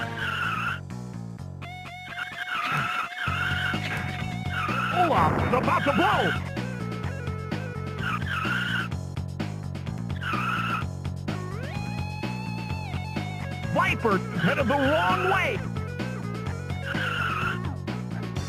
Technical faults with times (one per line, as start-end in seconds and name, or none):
none